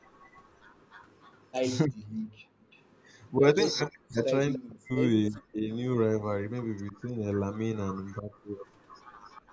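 Speech throughout, and for the whole of it there's a faint delayed copy trailing the voice by about 0.3 s, sitting roughly 25 dB down. That's an echo leak, likely from a far end on loudspeaker whose echo canceller let some of its mic pickup slip back into the call. The voice also gets pushed down hard, as much as 40 dB or so, from 1.85 to 2.18 s and again in chunks adding up to around a second and a half between 3.73 and 8.32 s. That sounds like speech suppressed in double talk, with the canceller ducking everything while both ends overlap. Separately, from 2.46 to 2.65 s the room sound drops out by about 32 dB for a moment before coming back. That's background gated by the echo canceller, clamping the mic while the loudspeaker plays. The top end stopping at 8 kHz is just the normal call microphone processing.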